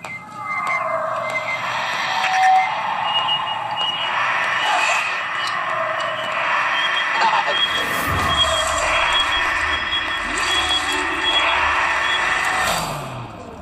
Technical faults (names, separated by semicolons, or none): loudspeaker feedback squeal